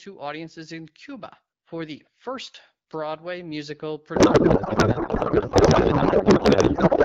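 From 4.15 s to the end, the speech dissolves into garbled, warbling noise that barely tracks it: a codec payload misread, with octet-aligned AMR-WB frames decoded as bandwidth-efficient.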